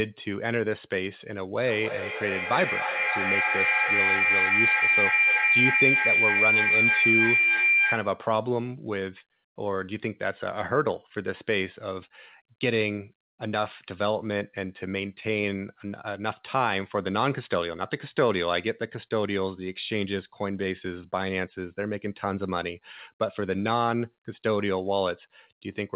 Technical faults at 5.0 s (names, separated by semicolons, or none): feedback howl